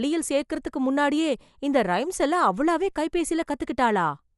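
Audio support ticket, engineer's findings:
Likely Dolby Digital compression at a starved bitrate, consistent with roughly 64 kbps: band cut with nothing above 11.5 kHz, many frequency lines left without mantissa bits and refilled with noise. Speech dull throughout, rough fluttering grain around voiced tones.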